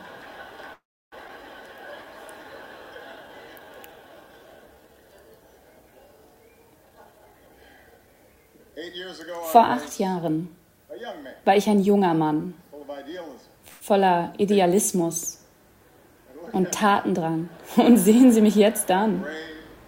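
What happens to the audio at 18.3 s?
From 18.25 to 19.84 s a jitter buffer speed-up trims short pitch-period slices to drain excess buffered audio, running about 3% fast and dropping around 50 ms in total. Unlike a sample-rate speed-up, the pitch stays unchanged.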